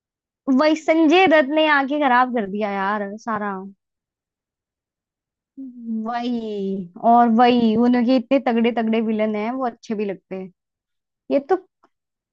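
Nothing in this speech recording stands out as a technical fault; there's no moment where anything goes wrong.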